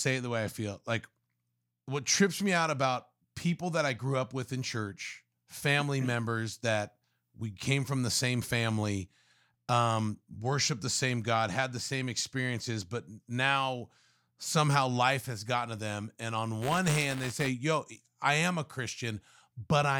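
From 16.61 to 17.49 s, buffer tearing occurs: the write and read positions in the ring buffer slip and cross every period, splicing a small slice of audio about a hundredth of a second old into each buffer. The speech takes on a robotic 188 Hz buzz, which fits a 256-sample buffer.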